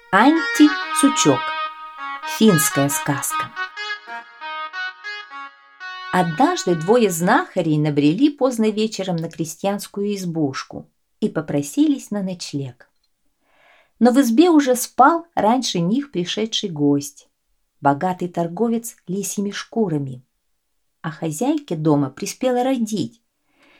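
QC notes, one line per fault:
No faults found. Nothing in the audio calls for a QC entry.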